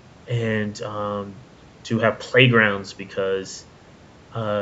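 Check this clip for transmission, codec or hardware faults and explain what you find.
No transmission, codec or hardware faults.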